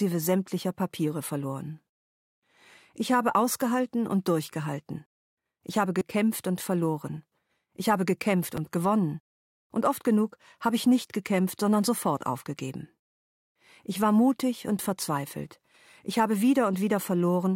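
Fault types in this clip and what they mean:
repeated buffer: New audio reached the device late, so it replayed its last 5.3 ms block, which fits a 256-sample buffer. From 5.99 to 6.01 s four extra repeats make a brief buzz, and single repeats at 8.57 s and 14.78 s sound as clicks.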